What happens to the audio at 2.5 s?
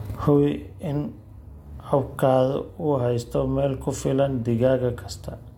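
Nothing goes wrong at 2.5 s; the speech carries straight through that moment with no dropout, glitch or other fault.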